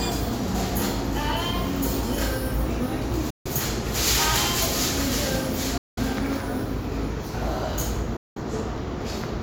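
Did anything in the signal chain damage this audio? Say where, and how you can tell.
Yes. The sound cuts to silence three times, at 3.30 to 3.47 s, 5.78 to 5.99 s and 8.16 to 8.37 s, gaps of about 150, 190 and 190 ms. This is likely a Bluetooth dropout at the wireless playback stage, where late packets were discarded and the output stayed silent until fresh ones arrived. The sound resumes further along rather than where it stopped. On a waveform each gap is a flat, sharp-edged hole, and on a spectrogram a clean vertical blank band across all frequencies.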